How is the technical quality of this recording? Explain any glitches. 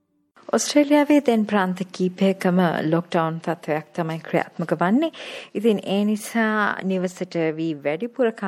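The recording has audible technical flaws: a steady compression character throughout and one brief glitch.

MP3 compression, throughout: the treble is dulled and the sound is plainly watery and swirly, likely from lossy encoding at a bitrate around 64 kbps, which starves high frequencies of bits.

Corrupt frame decoded, at 3.04 s: a couple of damaged compressed frames were played anyway, misplacing energy in frequency and producing a faint blip, quiet at about -50 dBFS.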